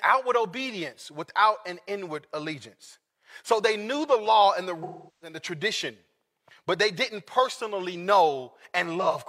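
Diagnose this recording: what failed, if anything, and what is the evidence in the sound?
Codec stage: AAC frame loss with concealment. The speech smears and fades at 4.83–5.37 s, and smears briefly at 9.01–9.16 s, as the decoder reuses its last good spectrum.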